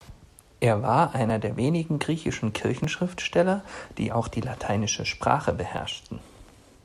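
Speech with tiny skips at 1.30, 2.84 and 5.78 s, each losing around 5 ms, most likely a dropped buffer (overrun) splicing the audio straight across.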